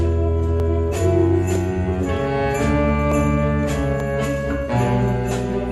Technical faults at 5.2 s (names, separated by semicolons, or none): none